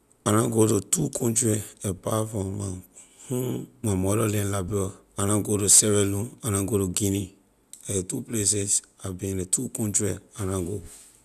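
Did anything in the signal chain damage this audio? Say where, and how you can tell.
No, nothing in this speech recording stood out on listening as damage from any stage of the signal chain.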